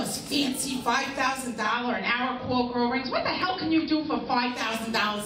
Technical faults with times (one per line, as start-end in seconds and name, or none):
1.27 block of digital silence
1.50-4.74 digital radio blending to analogue
3.42 block of digital silence